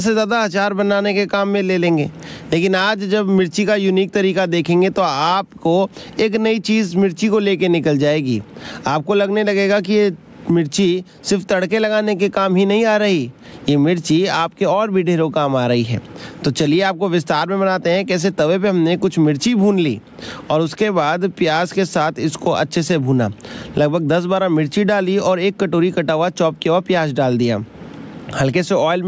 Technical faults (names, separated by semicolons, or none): gain pumping